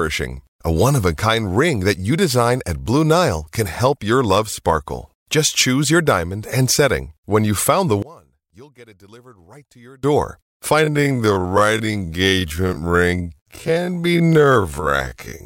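From 8.02 to 10.03 s the speech collapses by about 27 dB, likely one channel inverted, so the centred voice cancels when summed. Then from 10.78 s to the end, the pace halves while pitch holds, which is likely a time-stretched section slowed to 0.5x.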